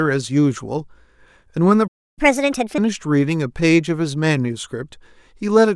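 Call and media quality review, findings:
Playback stall, 1.87 to 2.19 s: speech cuts to silence for about 0.30 s, then resumes where it stopped. Likely player buffer underrun or blocked audio thread. Unlike a packet dropout, nothing is skipped; the sound just pauses and waits.

Catch-up at higher speed, 2.19 to 2.78 s: speech runs at 1.5x with pitch raised by roughly a fifth, then snaps back to normal. The player is resampling its backlog to recover the lost time. Speed and pitch rise together, which separates it from a pitch-shift fault.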